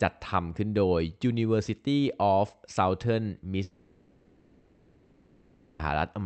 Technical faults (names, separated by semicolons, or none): long network dropout